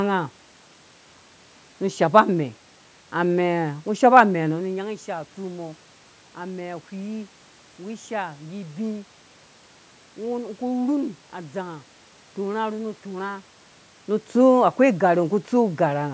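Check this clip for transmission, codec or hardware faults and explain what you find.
Nothing here points to a transmission, codec or hardware problem: the top end stops at 8 kHz and the lowest bass is trimmed, as expected from a call microphone's normal processing, the room background belongs to the recording, and the level dips and swells around 4.5 s and 13.5 s are just the talker shifting position relative to the microphone.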